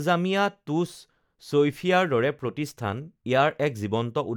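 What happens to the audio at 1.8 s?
Nothing goes wrong at 1.8 s; the speech carries on intact through that moment with no dropout, click or distortion.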